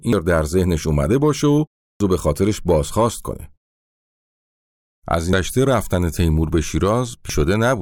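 Short glitches break into this speech recording at 0.13, 2.0, 5.33 and 7.30 seconds. They come from damaged data in a compressed stream: at these points the encoded bytes were corrupted, so the decoder misread the affected frames, lost its place in the bitstream and had to hunt for the next valid frame header before normal playback resumed.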